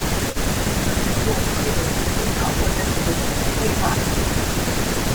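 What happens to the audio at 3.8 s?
At 3.8 s the speech is near the end of a stretch of speech suppressed in double talk, running from 3.03 to 3.86 s. The level dips by up to about 10 dB in patches totalling roughly 0.4 s, so the sound thins and partly drops out. The likely cause is an echo canceller turning everything down while both sides talked. On a waveform the envelope sags in uneven bites; a spectrogram shows weakened, faded upper bands.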